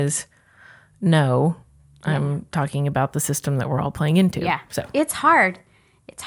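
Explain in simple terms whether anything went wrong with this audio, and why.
Between about 2.81 and 4.92 seconds there is imaging from linear upsampling. The speech was converted to a higher sample rate by joining samples with straight lines. That dulls the top end and leaves a faint metallic shimmer on s sounds. Codec warble bubbles and changes, but this shimmer stays steady.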